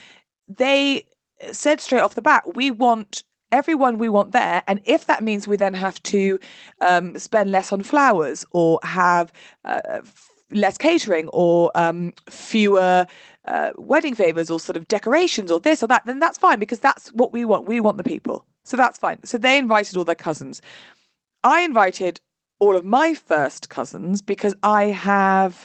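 No technical faults are audible in the speech, which comes through a call path whose codec limits the sound to a band ending at about 8 kHz, consistent with Opus running at around 20 kbps.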